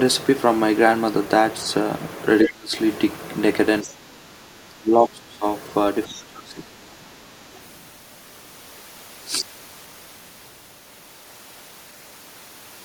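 The clip is speech, and in three places the talker is pulled down by speech suppressed in double talk: 2.44–2.75 s, with a drop of roughly 30 dB, 3.83–5.45 s, at roughly 15 dB, and 6.07–7.06 s, at roughly 20 dB. The voice sinks, dulls and breaks up while a second voice is present. The likely cause is an echo canceller that could not tell the local talker from loudspeaker echo during simultaneous talk and attenuated everything. Alongside this, the other side's voice leaks through as short fragments. The strongest is at 2.45–2.49 s, only about 5 dB under the speech. Quieter ones come at 3.82–3.89 s and 6.09–6.23 s, both about 20 dB down, and a faint trace at 7.28–7.62 s sits about 35 dB down. These scraps are the far end's audio from the local loudspeaker, likely left in the microphone signal because the echo canceller did not fully remove it.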